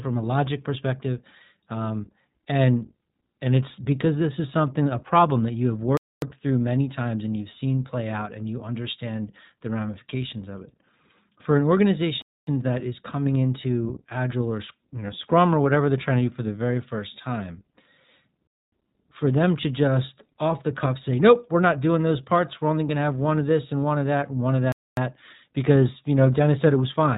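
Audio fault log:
Throughout: iLBC codec. Each short frame's excitation is coded on its own at a low rate, which fits iLBC's 20 ms mode at 15.2 kbps. Nothing above 4 kHz survives, so the speech sounds muffled, plainly rough and somewhat synthetic.
5.97–6.22, 12.22–12.47, 18.47–18.72 and 24.72–24.97 s: gap between chunks. The audio arrives in 6-second pieces with 250 ms of silence inserted at each join. These holes fall after "problem that you have", before "that is coming into", and after "that and one of".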